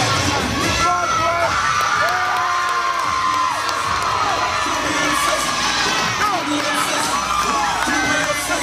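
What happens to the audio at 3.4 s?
Nothing goes wrong at 3.4 s; the audio runs through that moment intact, with no dropout, click or distortion.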